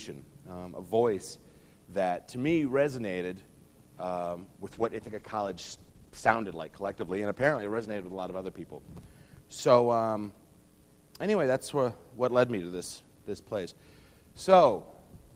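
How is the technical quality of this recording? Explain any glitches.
There is one glitch, a call bitrate drop from 4.74 to 8.53 s. The encoder's rate falls from 32 to 15 kbps, so coding coarsens and the sound turns rough and muffled. Unlike packet loss, it degrades steadily without dropouts.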